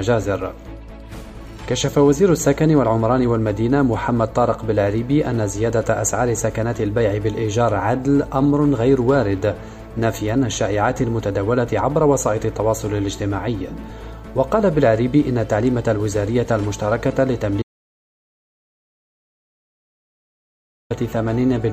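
At 17.62 s the audio stops dead. This is an audio dropout to silence. The gap runs to 20.90 s, about 3.28 s in all. It is silence, with no room tone or hiss underneath. The sound cuts off abruptly and returns just as abruptly mid-flow. Whatever happened in that stretch is lost. The likely cause is a lost input, such as a disconnected device or failed link, while recording continued writing silence.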